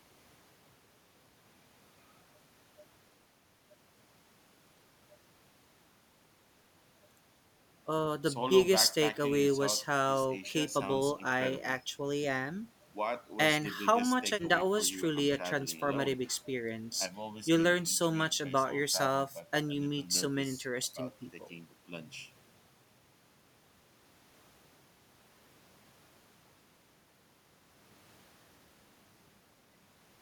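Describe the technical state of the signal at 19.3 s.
The speech sounds hollow and phasey from 17.06 to 20.15 s: channel delay (comb filtering), one channel running about 1.5 ms late, notching evenly from around 400 Hz.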